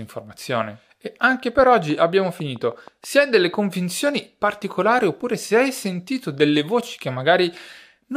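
From 1.90 s to 3.37 s, between "anche per" and "convinzioni particolari oppure se", the speech carries a train of clicks. Around ten near-identical pulses arrive at a steady 6.2 per second, each about as loud as the speech, so they read as a clear ticking over the voice and through the gaps between syllables. The regular, uniform pulses likely come from electrical interference or a faulty connection or power supply.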